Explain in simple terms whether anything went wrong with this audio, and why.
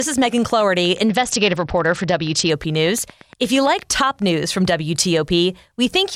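A train of clicks runs from 0.02 to 3.92 s: about 30 sharp ticks, evenly spaced at roughly 8.5 per second and about as loud as the speech, audible in pauses too. The likely cause is electrical interference or a faulty connection or power supply.

A Bluetooth SBC bit pool drop occurs from 1.09 to 2.50 s. The phone sharply cut the data it spent on the sound, so the speech loses its crisp upper tones, turns dull and picks up a gritty, grainy noise until quality returns.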